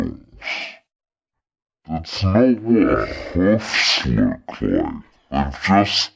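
A wrong sample rate affects the speech from start to finish. The samples are being played at half the rate they were captured at, with no conversion in between, which fits audio recorded at 32 kHz and played back at 16 kHz. Because speed and pitch are tied to the same clock, everything runs at 0.5x speed and drops a full octave, 12 semitones. Voices come out slow, dragging and unnaturally deep.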